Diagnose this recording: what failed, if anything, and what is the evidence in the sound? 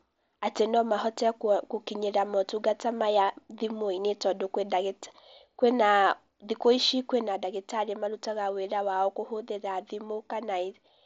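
What failed is a sudden gain jump at 7.27 s: the speech drops by about 4 dB in a single step and stays down until the end. The background noise falls by the same amount at the same instant, so the change sits in the signal chain rather than in how the talker spoke. That points to a likely digital gain change applied without a ramp, probably in call processing. The level step comes through the mSBC headset link, which carries nothing above 7.7 kHz.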